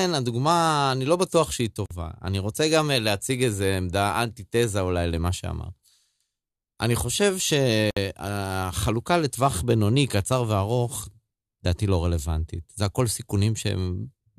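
At 1.86 s the speech drops out for about 48 ms, then resumes exactly where it left off, and at 7.91 s the same thing happens again for about 60 ms, six seconds later. Each is a gap at a join of encoded pieces. The audio was encoded in separate segments and spliced without trimming, so one segment's padded final frame and the next segment's encoder start-up delay both survive as a short hole of silence. Its edges are smeared by the codec, so the silent part is shorter than the full gap.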